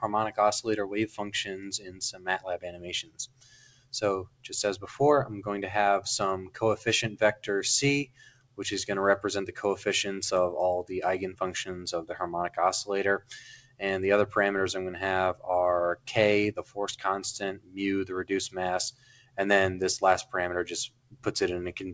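From start to finish the level pumps and thins: sustained material sinks while sudden onsets punch through, with the gain swinging by something like 15 dB. That is a noise suppressor applied to music or sounds, a speech-tuned suppressor that treats steady tones, ambience and decay tails as noise and keeps pulling them down. The top end stops at 8 kHz, which points to a wideband call codec such as G.722 at 64 kbps on the call path.

Within that, the sound cut by the noise suppressor shows up as distinct dips where held or fading sound collapses. The longest runs from 1.1 to 4.96 s, with most of those seconds ducked by up to about 19 dB. Shorter cuts follow at 6.43–7.45 s (about 18 dB), 8.05–8.59 s (about 20 dB), 13.19–13.82 s (about 19 dB), 16.56–16.78 s (about 17 dB), 17.53–17.78 s, 18.91–19.38 s and 20.88–21.29 s (each about 19 dB). In each, the suppressor judged the steady content to be noise and cut it harder than its surroundings.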